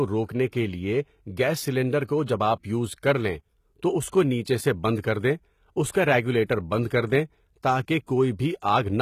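From start to end, the speech shows HE-AAC compression at what sounds like roughly 20 kbps. Treble is rebuilt from lower bands, so s sounds turn gritty and lispy, with nothing above 14.9 kHz.

Wait, the cause-only rule: the word likely goes on the cause, once.

The speech likely went through HE-AAC compression at a low bitrate, around 20 kbps. Treble is rebuilt from copied lower bands, so s sounds turn gritty and lispy, with nothing above 14.9 kHz.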